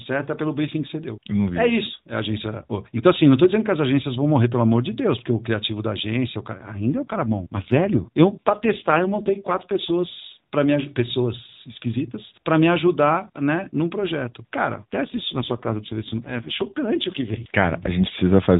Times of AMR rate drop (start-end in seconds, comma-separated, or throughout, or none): 6.87-10.07, 14.74-17.56